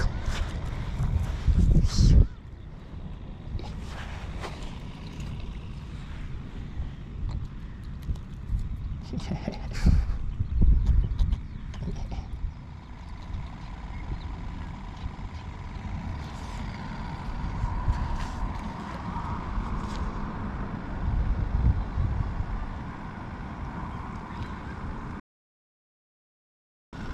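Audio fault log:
25.20–26.93 s digital broadcast dropout: the receiver mutes on failed frames with a 3 ms fade, losing 1.73 s; the waveform goes flat and the spectrogram shows a blank vertical band.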